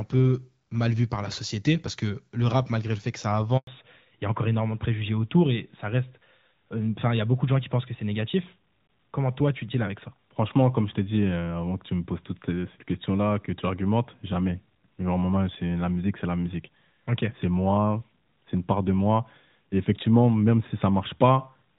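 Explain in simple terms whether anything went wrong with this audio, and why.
Right after "le fait que ça", at 3.57 s, the voice cuts to silence for about a tenth of a second, until 3.67 s. This is a handover gap: the phone switched the call to a different network, and no sound got through during the switch, so that moment is lost.

From 3.67 s to the end, the voice sounds duller and flatter, like an old-fashioned phone call. This is a fallback to narrowband: after the switch, the call dropped from the clearer HD Voice codec to an older one that removes everything above 4 kHz.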